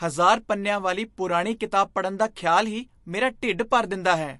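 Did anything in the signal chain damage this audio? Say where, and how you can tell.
Yes. Throughout the speech the sound is plainly watery and swirly, with s sounds turning metallic and nothing above about 11.3 kHz. That points to the codec stage, likely MP3 compression at a low bitrate around 48 kbps, cutting the treble and dropping weak frequency lines.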